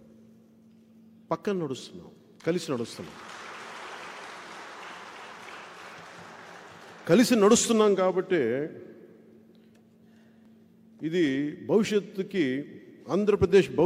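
Tiny skips in the sound occur at 0.49, 2.48, 6.45 and 10.45 s, all landing on a 2-second grid. They come from overlap between stream segments: where segment time stamps overlapped, the player trimmed several milliseconds of real audio, leaving a waveform jump.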